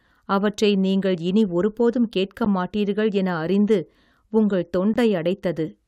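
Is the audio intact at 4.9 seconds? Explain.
No. At 4.94 s there is a gap at a join of encoded pieces. The speech drops to silence for about 19 ms, with smeared edges, then resumes where it stopped. Two separately encoded pieces were joined untrimmed, leaving encoder delay and padding.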